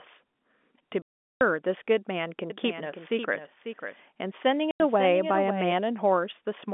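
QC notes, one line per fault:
1.02–1.41 s and 4.71–4.80 s, packet loss filled with silence: a 390 ms hole, then a 90 ms one. Both have hard edges, and their lengths fit 30 ms packets dropped and replaced with nothing.
2.50–5.72 s, doubled audio track: a full-band copy trails about half a second behind, roughly 10 dB down, with no room tail. It starts and stops abruptly, likely from a second, slower capture path. The copy keeps the same 200 Hz–3.5 kHz telephone band as the G.711 line.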